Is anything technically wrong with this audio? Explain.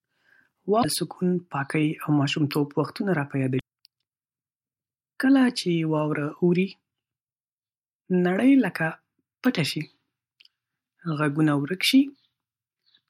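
Yes. This speech has damaged data in a compressed stream at two points: 0.80 to 0.85 s, just before "سکون پاکۍ او ماشومتوب", and 3.57 to 3.61 s, right after "ماشومتوب وختونه را په". Corrupt bytes made the decoder misread frames and lose sync until it found the next valid frame header. Each event is heard as a brief chirp, squawk, click or short hole. On a spectrogram it shows as a short vertical disturbance or gap. The waveform shows an abrupt glitch or discontinuity.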